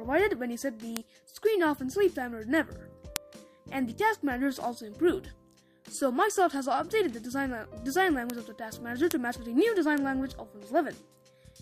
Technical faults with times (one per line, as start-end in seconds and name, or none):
0.97 bit error spike
3.16 bit error spike
8.30 bit error spike
9.11 bit error spike
9.98 bit error spike